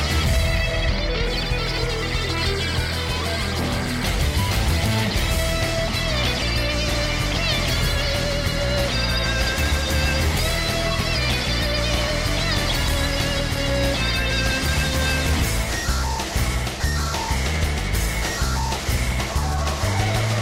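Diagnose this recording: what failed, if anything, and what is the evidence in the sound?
A crude rate conversion fault at the sample-format conversion stage, from 1.26 to 4.13 s: a gritty, inharmonic fizz rides on loud and high content, roughly 25 dB below the signal. Samples were dropped or repeated without filtering, which fits a 48 kHz to 44.1 kHz conversion.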